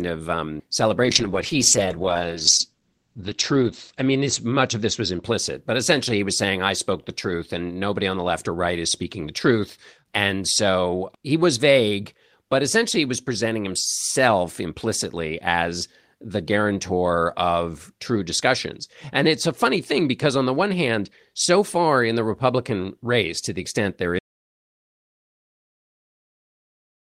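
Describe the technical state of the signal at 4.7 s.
At 4.7 s the speech is inside a call bitrate drop from 1.07 to 5.29 s, between "of um" and "but essentially he was". The encoder is starved of bits. It codes coarsely, sounding rough and watery. Its bandwidth falls from 20 kHz to 8 kHz, which muffles the top. The rate drop, which fits roughly 32 to 11 kbps, bottoms out for about 2.8 s.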